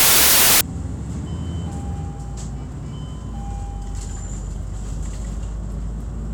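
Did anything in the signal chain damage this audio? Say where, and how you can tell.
Yes. Wrong sample width from 0 to 0.61 s, at the sample-format conversion stage. Audio packed as 24-bit integers was read back as 32-bit integers, so each value is assembled from bytes belonging to neighbouring samples, and only some keep the real signal's top bits. You hear a burst of loud noise with the original sound buried inside it, running 1.33 times too fast, with its pitch raised to match.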